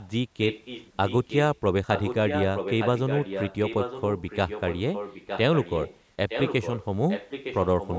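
Echo leak at 0–0.08, 0.48–1.59, 1.95–6.0, 6.29–6.85 and 7.08 s to the end: a 912 ms-delayed copy, faint first, loudest near 6.3–6.9 s, likely from incomplete echo cancellation, appearing as duplicated, time-shifted harmonic patterns on a spectrogram.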